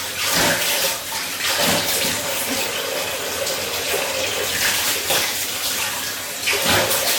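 Hard clipping runs through the whole recording. The signal was driven about 13 dB past what one stage could pass, so the peaks were sliced flat. Only a few percent of the samples cross the limit, but every loud moment hits it. The flat tops throw new harmonics high into the spectrum. Loud sounds carry a harsh, gritty fuzz, and quieter peaks crackle.

A second fault also lasts the full length. The sound shows the mixed artefacts of more than one lossy codec heard together. This is likely transcoding between lossy codecs, and the mix of artefacts fits an MP3 at around 61 kbit/s followed by a WMA encode near 64 kbit/s. The second encoder wasted bits re-coding the first one's damage. Nothing remains above 18.6 kHz, so the very top of the spectrum is missing.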